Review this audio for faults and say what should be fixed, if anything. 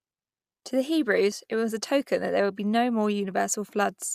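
Nothing here needs fixing, as no technical faults can be heard in the speech. No changes to the recording or its processing are called for.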